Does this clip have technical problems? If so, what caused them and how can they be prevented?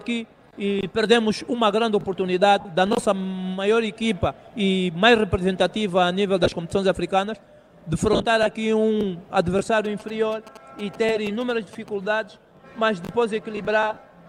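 Yes. There are lost LE Audio frames at 2.60–2.65 s, 6.44–6.52 s, 8.13–8.25 s and 13.94–13.97 s. The gaps last 50, 40, 90 and 30 ms. The middle two are broken into runs of about 20 and 40 ms. The decoder fills each gap from the last good spectrum with scrambled phases, so tones smear into brief noise. Keeping the receiver closer to the source, away from Wi-Fi congestion, would prevent this.

GSM signalling bursts run from 9.85 to 11.89 s. A nearby 2G phone was signalling, and the audio circuit rectified its radio bursts. They are heard as a galloping dit-dit-dit of short buzzes at about 217 Hz, roughly 20 dB below the sound. Keeping phones away from the audio gear and cables would prevent this.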